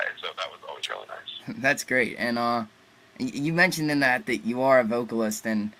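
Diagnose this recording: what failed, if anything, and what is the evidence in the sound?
The codec stage failed: damaged compressed frames, two or three at a time, were decoded instead of concealed, so misread gains put energy at wrong frequencies. This corrupt frame decoding gives short glitches at 0.83–0.90 s and 5.31–5.34 s, peaking around -15 dBFS, and a fainter one near -35 dBFS at 4.19–4.22 s.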